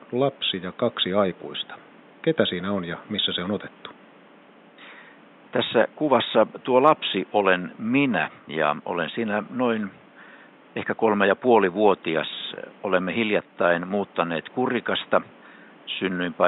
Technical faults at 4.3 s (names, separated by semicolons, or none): none